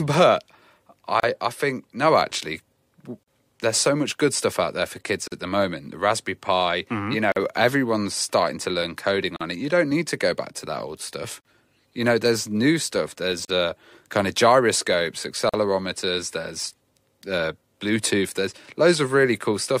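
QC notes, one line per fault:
1.2, 3.23, 5.28, 7.32, 9.36, 11.41, 13.45, 15.49 s, gap at a join of encoded pieces: separately encoded two-second segments joined untrimmed leave encoder delay and padding, so the speech drops out for about 33 ms at first, then 43 ms each time, with edges smeared by the codec.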